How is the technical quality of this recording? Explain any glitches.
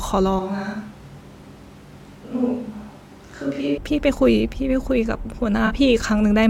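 Two faults stand out in this speech recording: a stretch of hollow, roomy sound near the start and a brief smeared patch near the end.

From 0.39 to 3.78 s the speech turns hollow and reverberant, likely a switch to a distant microphone after the close one dropped out. The level falls about 5 dB, bass thins, and room noise sits roughly 25 dB below the speech. A waveform shows a smaller envelope, and a spectrogram shows weaker lows and a raised noise floor, with abrupt edges at both ends.

From 5.66 to 5.71 s comes AAC frame loss with concealment. For 42.7 ms, which fits two lost frames, the decoder rebuilt the audio from the last good spectrum. It sounds like a short smeared, phasey blip. A spectrogram shows a blurred, noise-like smudge where harmonic detail briefly disappears.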